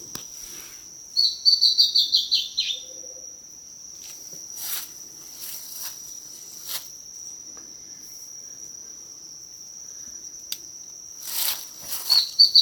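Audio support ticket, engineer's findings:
No faults found on listening: no dropouts, clicks, distortion or level jumps heard, nothing to trace to a component.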